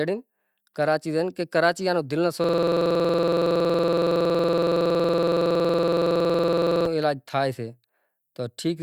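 System hang loop from 2.44 to 6.86 s in this speech clip: the driver froze while the hardware replayed one 46.44 ms buffer, which fits a 2048-sample buffer, as a 21.5 Hz stutter.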